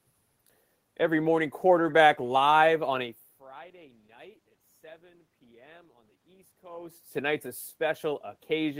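The speech recording has no technical fault from the system. Some background noise from the room is audible, and the voice level shifts around 3 s and again around 6.5 s as the talker moves relative to the microphone.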